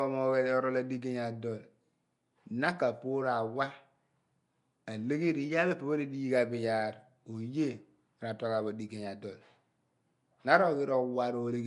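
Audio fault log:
throughout: Nellymoser compression, likely. The speech carries a rough, hissy halo with a smeared, underwater quality, and nothing is heard above 10.6 kHz. The codec spends a fixed, small bit budget on short blocks, so weak bands get no bits and are refilled with noise. The hiss comes from that substituted noise, which sets it apart from the swirling, warbling artefacts of a low-bitrate MP3. The plainly audible damage fits a rate around 44 kbps.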